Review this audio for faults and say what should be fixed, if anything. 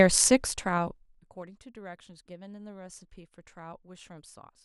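Zipper noise from 0.37 to 1.49 s: the speech level drops roughly 25 dB in unsmoothed 2 dB steps, about ten a second, each step clicking audibly, unlike a clean fader move. Interpolate gain per sample to prevent it.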